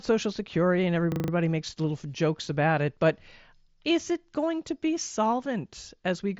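Speech, carried over a Bluetooth mSBC headset link that cuts off everything above about 7.7 kHz, breaks into a rapid, rattling stutter from 1.12 to 1.32 s, just before "makes little jokes about". A single 40 ms fragment repeats five times at 25 Hz. This is a system hang loop: the computer or driver stalled while the audio hardware kept replaying the same ring buffer.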